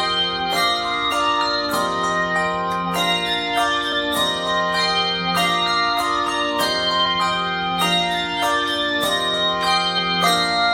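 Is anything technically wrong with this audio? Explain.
Yes. Damaged data in a compressed stream shows up at 1.10, 3.91, 7.05 and 9.97 s. At each point a stretch of the encoded stream is corrupt, so the decoder misreads or rejects those frames, loses its place and hunts for the next valid frame header before playback resumes. Each event is heard as a brief chirp or blip in the sound, lasting under 20 ms, and the four are spread roughly evenly across the clip.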